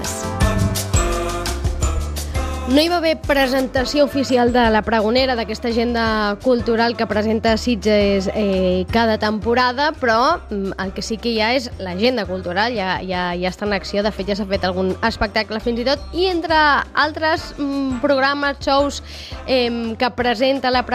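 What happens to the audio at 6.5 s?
At 6.5 s the audio sits inside a stretch of de-emphasis applied wrongly, running from 3.61 s to the end: a treble-cut curve was applied where no pre-emphasis needed undoing, pulling 10 kHz down by about 10 dB relative to 1 kHz, so the sound turns dull and muffled.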